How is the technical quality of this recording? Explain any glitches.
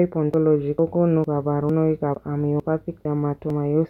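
The speech skips at regular intervals, at 0.34, 0.79, 1.24, 1.69, 2.15, 2.60, 3.05 and 3.50 s. This is audio missing between chunks. The likely cause is a recorder working in half-second chunks that drops a short piece each time it closes one chunk and opens the next. Roughly 50 ms goes missing at each joint, so the skips come about 0.45 s apart. The two sides butt together with no silence. Each one sounds like a small jump in the speech.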